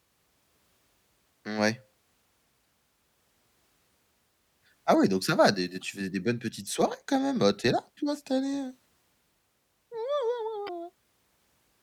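Damaged data in the compressed stream hits at 2.65 s, 5.81 to 5.83 s just before "faisais des bonnes petites", and 10.65 to 10.69 s: corrupt frames throw the decoder off, giving short glitches as it resyncs.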